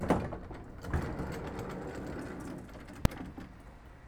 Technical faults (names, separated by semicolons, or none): invalid numbers at full scale